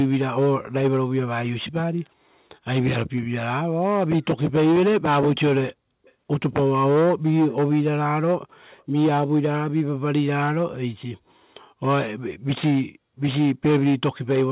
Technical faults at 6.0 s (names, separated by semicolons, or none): echo leak